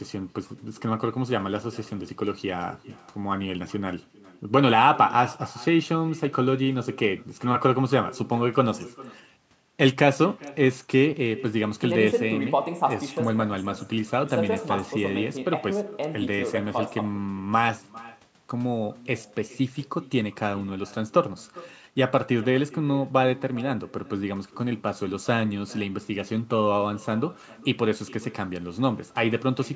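Right through the speech there's echo with no canceller: the far end's loudspeaker is feeding back into their microphone uncorrected, so every phrase returns roughly 0.4 seconds later as a faint, thin copy, about 21 dB down, riding over the band-limited call audio that tops out at 8 kHz.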